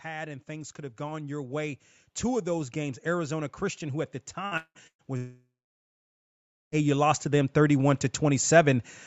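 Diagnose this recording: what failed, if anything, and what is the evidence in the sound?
Automatic gain rising in the call processing: from 0.05 s to 8.88 s everything swells together by about 17 dB as the gain control keeps pushing up.

Burst of packet loss on the network side, at 4.45 to 4.54 s and 4.87 to 5.02 s: held sound fades, about 60 and 120 ms skipped, then audio jumps ahead.

Long network dropout, likely a network stall, at 4.57 to 4.78 s and 5.17 to 6.75 s: concealment buzz or hiss fades to silence, and roughly 1.56 s simply vanishes in the second one.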